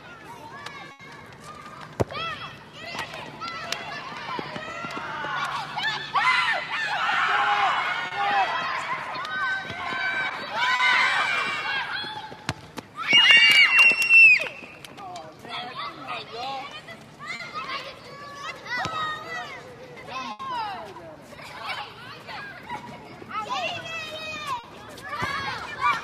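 A burst of packet loss at 0.91 to 1.02 s leaves about 80 ms missing. The receiver carries the last sound forward and lets it fade, giving a held buzz or decaying hiss before the audio jumps ahead. It is longer and more plainly a gap than the short losses that follow.

Short concealed packet loss occurs at 8.07 to 8.14 s, 10.75 to 10.82 s and 17.35 to 17.42 s, where about 40 ms of filled-in sound each time blends straight back into the real signal. Each is a brief smear or wobble rather than an audible hole.

A second burst of packet loss at 20.31 to 20.42 s again fades an extended sound across about 80 ms before the audio resumes further on.

A final short concealed packet loss at 24.59 to 24.66 s adds one more 40 ms smear.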